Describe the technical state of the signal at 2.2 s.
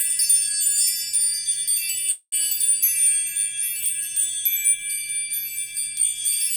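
At 2.2 s there is a call audio freeze, from 2.11 to 2.34 s. The last sound is stretched into a fading buzz or hiss, then about 60 ms of silence. Delayed packets likely emptied the jitter buffer. Playback resumes where it stopped, 0.21 s late, with nothing lost.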